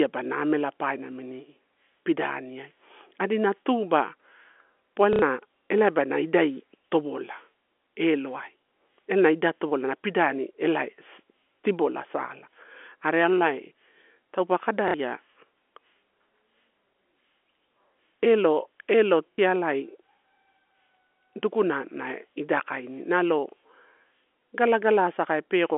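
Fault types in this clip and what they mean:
Packet loss with last packet repeated: three short robotic stutters, each a buzz lasting about 90 ms near 5.1 s and about 60 ms near 14.9 s and 19.3 s. Audio went missing, and the receiver filled each gap by replaying the last good chunk until fresh audio arrived. The replayed chunks don't line up with the pitch, so the run buzzes, which fits 30 ms packets looping at roughly 33 Hz.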